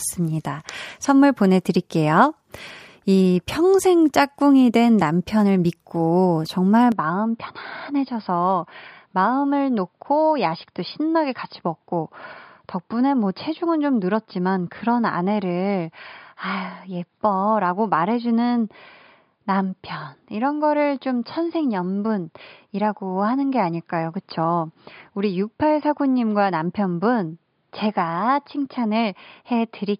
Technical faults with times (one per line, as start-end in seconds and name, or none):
6.92-29.99 input switched to a poorer device